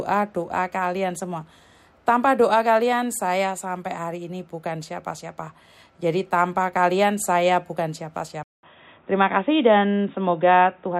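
At 8.43 s the sound drops out for about 200 ms, then returns duller and boxier through to the end. Nothing above 3.8 kHz survives after the gap, and a faint new noise floor appears, roughly 50 dB below the signal, while the overall level stays about the same. This points to an input switched to a poorer device, likely a change to another microphone or a headset's call profile, whose narrower band and different character replace the original pickup.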